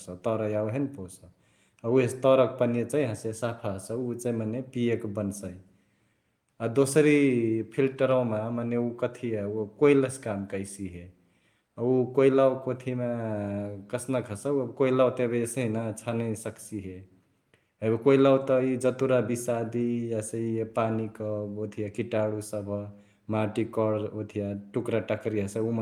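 Nothing stood out on listening to this speech recording.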